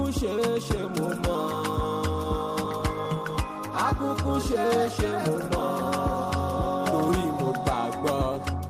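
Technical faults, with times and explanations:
Nothing stood out as a technical problem on listening.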